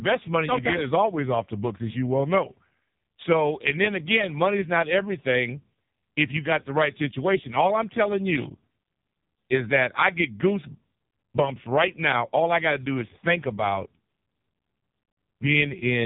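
From start to finish the speech carries AMR narrowband mobile codec damage: nothing passes above 3.8 kHz, and heavy low-bitrate coding makes it buzzy and synthetic, which fits AMR-NB's lowest mode of about 4.75 kbps. Simple band-limiting would sound muffled but never robotic like this.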